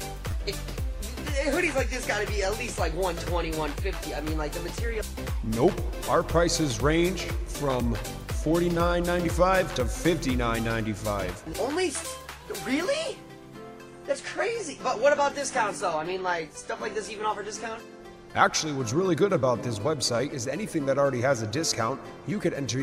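At 0.31 to 0.33 s, and again at 6.04 to 6.06 s, fresh audio failed to reach the output in time, so the device replayed its last buffer, a repeated buffer fault. Each time, a tiny slice sounds three times in a row with hard joins, which fits a 10 ms buffer. At that small size the repeats fuse into a brief buzzy click rather than a clear stutter, and nothing appears to be skipped afterward.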